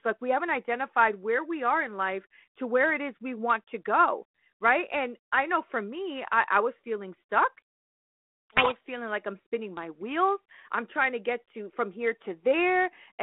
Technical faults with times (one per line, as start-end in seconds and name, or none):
7.58-8.78 codec payload misread